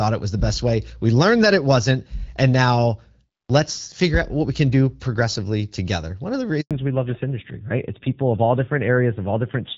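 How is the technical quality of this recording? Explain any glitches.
The recording has two linked faults around 6.6 s, where the call's quality drops partway through the speech.

Handover gap, 6.61 to 6.71 s: the call switched networks and no speech frames arrived for 100 ms, so the voice fades out quickly and the audio is briefly silent.

Fallback to narrowband, from 6.71 s to the end: the link dropped from HD Voice to an older narrowband codec. Nothing above 4 kHz remains, so the speech turns duller and rougher. Before the switch, the wideband sound fits AMR-WB at around 12.65 kbit/s, with light coding damage. The rougher sound afterwards fits AMR-NB at about 7.4 kbit/s.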